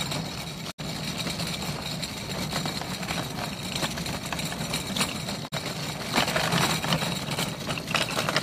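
At 0.70 s the audio drops out for about a tenth of a second, returning at 0.80 s; a shorter gap follows from 5.47 to 5.54 s. Both are digital broadcast dropouts: the receiver muted while corrupted frames failed, consistent with two lost frames and then one. Each hole enters through a 20 ms fade. On a waveform these are flat silent gaps; a spectrogram shows full-height blank vertical bands.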